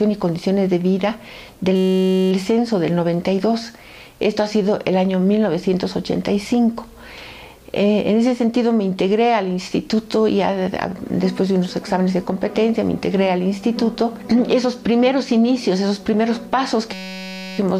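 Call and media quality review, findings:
System hang loop, 1.76–2.32 s and 16.93–17.58 s. Steady buzz at about 188 Hz replaces the audio in both spans. Probable component: audio driver or host stall while the output hardware kept replaying its ring buffer. Loop length 5.33 ms, which fits a 256-sample buffer. Roughly 105 repeats in the first span, 122 in the second. The buffer is short, so the exact repetition fuses into a pitched tone rather than a stutter. No audio appears to be skipped afterwards.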